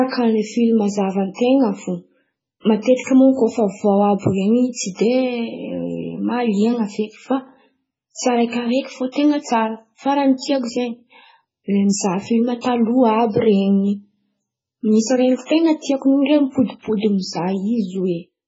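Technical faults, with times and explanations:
Throughout, MP3 compression: likely a very low bitrate, around 16 kbps, forcing a treble cut near 7.7 kHz and dropping weak detail, so the speech sounds dull, watery and swirly.
12.61 s, pre-echo: quantisation noise spread across a coding block ahead of a sharp attack, producing a short hiss about 37 ms early, just after "le mizaha filma".
15.46 s, pre-echo: block-spread quantisation noise arrives about 43 ms before an attack, a brief hiss that blurs the onset just before "ten̈a tiako".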